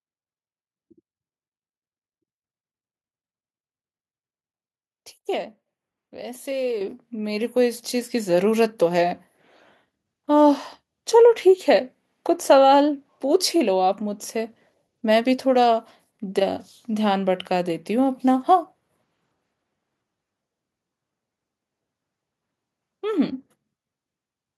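At 6.81 s and again at 7.83 s the microphone volume is stepped up, about 8 dB then about 4 dB, as software raises input gain. Speech and background jump together, showing as abrupt waveform steps and brighter spectrogram bands.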